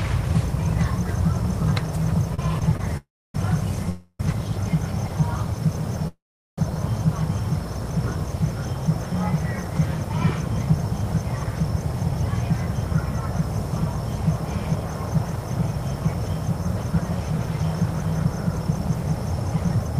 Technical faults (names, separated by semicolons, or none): short stall from a late packet; call audio freeze; jitter buffer speed-up